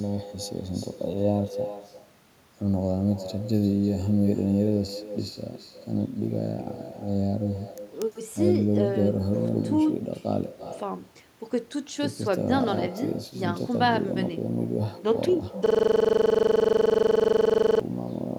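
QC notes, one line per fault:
throughout: echo with no canceller. Every phrase comes back roughly a third of a second later, about 14 dB down and thinner. The far end's loudspeaker is feeding its microphone, and nothing is taking that copy back out before it returns.
15.66–17.81 s: system hang loop. The audio locks onto one 42.67 ms slice and repeats it about 50 times, giving a steady buzz at 23.4 Hz. The machine stalled while the hardware kept replaying its ring buffer, which fits a 2048-sample buffer.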